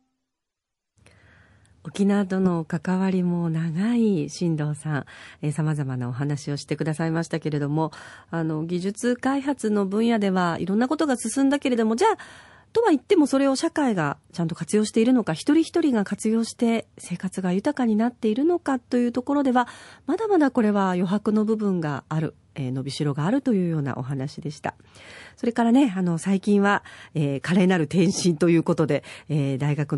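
Speech, with a watery, swirly texture throughout, likely MP3 compression at a low bitrate around 48 kbps; a spectrogram shows flickering holes. Pre-echo appears at 27.42 s (26 ms) and 29.58 s (22 ms): hiss about 11 to 12 dB up smears ahead of each attack, visible as a noise smudge before the onset, since the codec kept long blocks.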